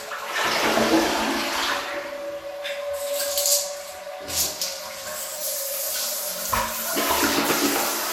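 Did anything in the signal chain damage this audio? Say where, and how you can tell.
Yes. The damage is at the codec stage, and the likely cause is generation loss from the audio passing through an MP2 encoder several times, perhaps around five, at a rate that fits 96 kbit/s. Throughout the clip nothing is present above 17.4 kHz, and the sound is swirly, hollow and smeared beyond what one pass at that rate would produce, with blurred attacks. Each re-encode quantises on a shifted frame grid, so noise and spectral gaps pile up.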